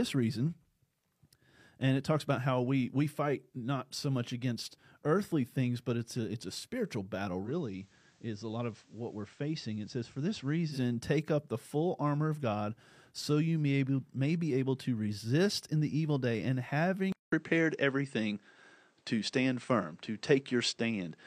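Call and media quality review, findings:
Digital radio blending to analogue, 7.42 to 10.80 s. Starts after "it's a spiritual battle"; back to digital before "take up the full". Receiver drops to FM over a 113 ms crossfade. Hiss comes up, roughly 35 dB below the signal, and level falls about 4 dB. Spectrogram: a raised broadband noise floor. Waveform: envelope steps down.

Input switched to a poorer device, 17.12 s to end. After "the evil day and", a 200 ms dead gap, then duller, narrower sound. Likely a capture-device change. New background noise sits roughly 45 dB below the signal; level shifts by about 5 dB. Spectrogram: blank column at 17.12 s, then a narrower band. Waveform: flat gap, then a new envelope level.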